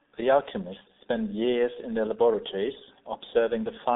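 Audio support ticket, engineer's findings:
Muffled, hoarse speech throughout, consonants smeared, nothing above 3.8 kHz; band roughly 200 Hz to 3.7 kHz. Probable component: G.723.1 codec on the call path, heavy damage. Mechanism: 30 ms frames with a slowly updated voice model blur fast transitions; the low rate, which fits a 6.3 kbit/s stream, leaves the voice rough and thin.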